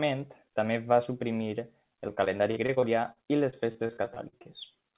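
Right after "també va suprimir", from 2.08 to 4.47 s, repeated packet loss (robotic sound) sets in. About 18 brief gaps, none over 51 ms, are each filled by extending the preceding sound. Unlike a single dropout's silence, the speech turns choppy, with pieces missing. The call path's band stops at 4 kHz.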